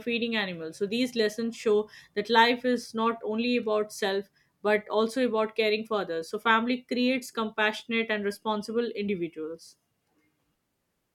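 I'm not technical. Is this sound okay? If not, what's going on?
Yes, no technical faults are audible anywhere in this speech recording.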